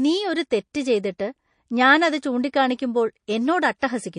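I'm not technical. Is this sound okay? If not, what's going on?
No. The whole clip sounds watery and swirly, and sharp s sounds come out metallic. This is likely MP3 compression squeezed hard. To save space, the encoder drops the treble and parts of the sound that come and go from moment to moment.

There is also a pre-echo from 3.79 to 3.82 s. A brief hiss, about 34 milliseconds long, arrives just before a sharp sound begins. The encoder spread its noise across a long chunk of audio, so the hiss leaks into the silence before the attack, which sounds softened.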